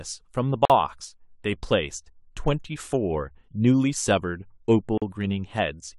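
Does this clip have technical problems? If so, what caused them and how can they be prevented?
Yes. Gaps at joins of encoded pieces at 0.65 to 0.70 s (47 ms) and 4.98 to 5.02 s (41 ms) are silences from untrimmed encoder start delay and final-frame padding. Prevent them by trimming encoder delay and padding before joining, or by encoding the speech as one continuous piece.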